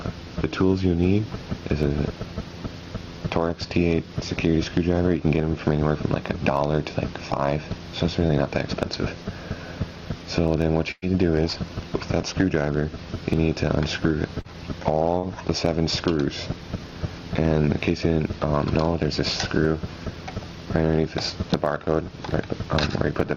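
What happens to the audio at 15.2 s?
Around 15.18 to 15.25 s, a short concealed packet loss occurs: roughly 40 ms of the stream failed to arrive at the decoder in time, and the receiver covered the gap by extending the preceding sound for about 44 ms before crossfading back into the real signal. Over that span the audio smears or wobbles briefly, with substitute material in place of whatever was actually lost.

At the same moment, as across the whole clip, there is gain pumping. The level is pulled down under louder sounds, swinging by about 10 dB. The likely cause is input gain set far too high, with a fast limiter or compressor clamping it on every loud sound. That squeezes loud and soft passages closer together and leaves the sound squashed.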